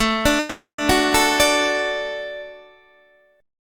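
At 0.39 s the sound stalls in a call audio freeze that runs to 0.80 s. The last bit of audio gets stretched into a fading buzz, and about 140 ms of that stretch drops to silence before things pick up again. That's most likely packets held up in transit with the jitter buffer running dry. Nothing's actually lost: the stream resumes right where it stopped, so about 390 ms of gap gets inserted and everything after runs that much later.

Then at 0.91 s there's a tiny underrun with held sample. The output buffer runs empty, and the converter just parks on its last value for about 2.7 ms, so the waveform goes flat for a moment. That length is a gap of 128 samples. Since playback carries on from where it left off with essentially nothing lost, it's a soft hiccup rather than a sharp click.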